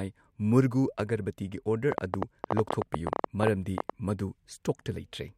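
A train of clicks from 1.92 to 3.91 s, likely interference injecting pulses: around twenty sharp pops, 11.7 per second, unevenly spaced, towering over the speech.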